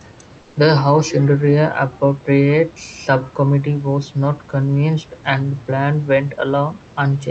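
From 0.41 to 0.55 s, about 140 ms, the room background drops by about 4 dB and loses its texture, becoming a flat, even hiss before the detail returns. This is comfort noise in place of the background, likely from Opus discontinuous transmission: with the sender's voice detector hearing only room noise sitting about 30 dB below the loud parts, transmission paused and the receiver filled the gap with synthetic noise.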